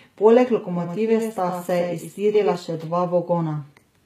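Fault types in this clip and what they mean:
HE-AAC compression: throughout the clip, the likely cause is low-bitrate HE-AAC, which fits about 20 kbps. The upper band is rebuilt from copied lower harmonics under a coarse envelope, so s sounds turn gritty and lispy, and nothing remains above 14.9 kHz.
Doubled audio track: from 0.73 to 2.55 s the speech is heard twice. The likely cause is a second copy mixed in about 100 ms late and roughly 5 dB quieter. This echo is dry and full-band with no room decay, and it switches on and off abruptly.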